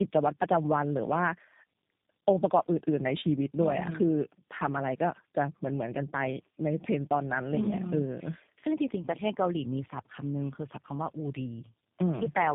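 Tandem speech coding runs through the whole clip: the speech has passed through about three speech codecs in a row, a chain that fits one ending in G.729A. Each coder re-encoded the previous one's degraded output, so errors stacked. It sounds rougher, noisier, muffled and warbly. On a spectrogram, nothing appears above 3.8 kHz, and harmonics look smeared and blotchy rather than cleanly striated. The waveform shows no distinct events.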